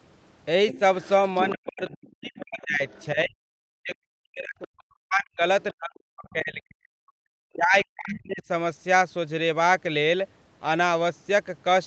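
From 0.69 to 3.06 s a second, fainter voice about 15 dB below the talker comes through. This is the other side's voice leaking through, likely loudspeaker echo the canceller missed. It is a separate voice added on top, not a loss of the main one.

From 1.53 to 6.99 s, about four seconds in total, the talker's own voice dips by as much as about 40 dB. This is speech suppressed in double talk, likely the canceller turning down both sides at once. It is heard as holes in the main voice, not as an extra voice.

Within that stretch, brief faint leaks of the other voice return at 4.64 to 4.68 s, 5.62 to 5.74 s and 6.27 to 6.32 s, each about 30 to 40 dB down.

From 7.55 to 8.43 s the talker's voice is suppressed again, dropping by about 35 dB.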